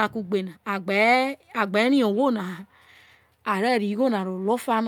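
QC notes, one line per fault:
No faults were found in this speech recording. Nothing in it called for a note.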